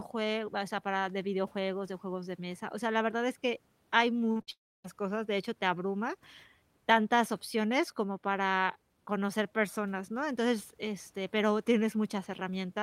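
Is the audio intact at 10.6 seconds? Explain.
Yes, at 10.6 seconds the speech plays through intact, with no dropout, click, distortion or other fault at that moment.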